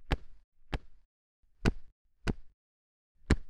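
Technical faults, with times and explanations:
Throughout, doubled audio track: every sound event is followed by a second full-band copy about 0.7 s later and roughly 5 dB quieter, with no decay or room colour, so it reads as a clean repeat rather than an echo. The likely cause is a second capture by a slower path or an edit holding two copies out of step. On a spectrogram and waveform, each onset reappears as a fainter duplicate shifted by the same distance.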